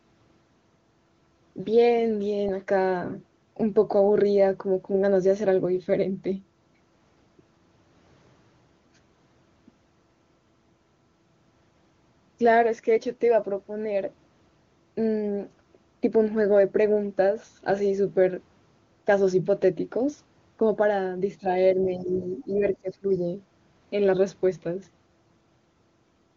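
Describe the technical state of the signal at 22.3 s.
At 22.3 s the likely cause is the echo canceller meeting double talk: with both ends speaking at once, it cannot tell the local talker apart from the loudspeaker echo and turns everything down together. This is speech suppressed in double talk, running from 21.97 to 22.64 s. The talker's level dips by about 10 dB at its deepest, and roughly 400 ms of that span is pulled down, so the sound thins and ducks in pieces.

Inside that span, from 22.28 to 22.35 s, comes the other side's voice leaking through. Here the likely cause is residual echo: the far end, played over the device's loudspeaker, reaches the microphone and is not fully cancelled. What gets through is a brief scrap roughly 30 dB below the talker, faint, sitting under the suppressed near-end speech. Around both, the AMR wideband (HD Voice) coding sounds clean, with no rasp or roughness of its own.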